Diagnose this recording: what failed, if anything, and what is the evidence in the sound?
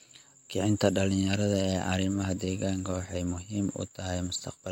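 Nothing failed here; the speech comes through with no dropouts, glitches or distortion anywhere, so there's nothing to trace back to any stage of the chain.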